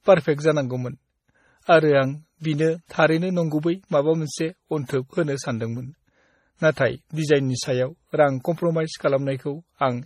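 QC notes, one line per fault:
Throughout: transcoding between lossy codecs. The speech carries two layers of coding damage heard together. Nothing is present above 16.6 kHz, and that ceiling stays fixed across the clip. The texture points to a low-rate WMA encode, around 48 kbit/s, followed by an MP3 encode near 32 kbit/s. The likely cause is re-encoding an already compressed file. The second codec spends its scarce bits reproducing the first one's artefacts, then adds its own artefacts on top.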